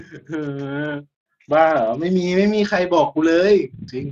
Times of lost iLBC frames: none

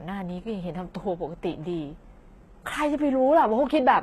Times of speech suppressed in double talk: none

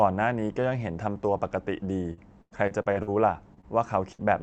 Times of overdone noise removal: none

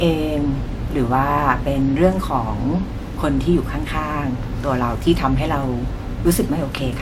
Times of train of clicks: none

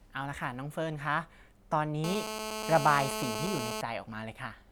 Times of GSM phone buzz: 2.04-3.81

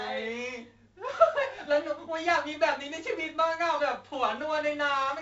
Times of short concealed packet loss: none

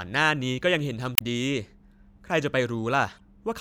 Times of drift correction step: none

